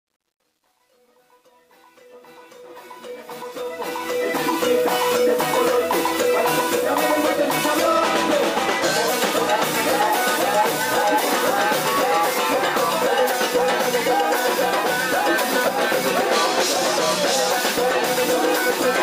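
From the very start to 4.56 s, the fade-in sounds gritty and grainy rather than clean, and it is at its worst up to 2.73 s, where the level is lowest. This is truncation distortion on a fade: the gain stage rounds each sample to a coarse step without dither, which fits a stage keeping only about 10 bits, so at low levels the waveform collapses into a few square steps.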